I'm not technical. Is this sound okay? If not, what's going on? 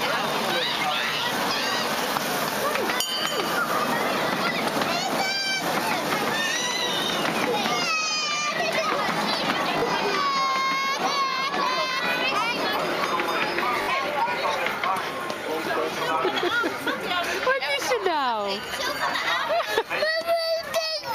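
No. At 9.78 to 9.82 s and 13.82 to 13.88 s there is a repeated buffer. A tiny slice of sound, about 20 ms, replays two or three times, giving a brief stutter.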